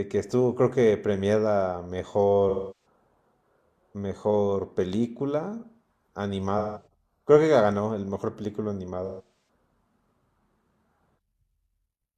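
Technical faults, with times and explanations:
2.49–2.86 s: AAC frame loss with concealment. About 0.3 s of audio goes missing and the decoder repeats the last good spectrum with scrambled detail, so the speech turns smeared and noisy before clean sound resumes.
6.58–6.86 s: AAC frame loss with concealment. A shorter gap of about 0.17 s is patched the same way, giving a brief phasey blur.
9.06–9.48 s: AAC frame loss with concealment. The losses are scattered over about 0.43 s, the longest run around 0.15 s, so the sound flickers between clean and smeared fill.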